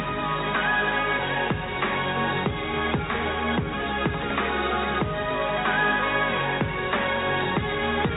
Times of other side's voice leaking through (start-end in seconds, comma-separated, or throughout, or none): none